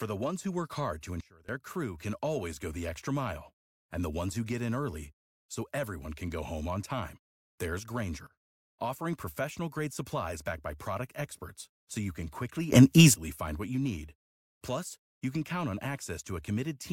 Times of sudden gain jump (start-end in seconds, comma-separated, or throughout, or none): 1.21-1.49, 8.27-8.64, 12.72-13.14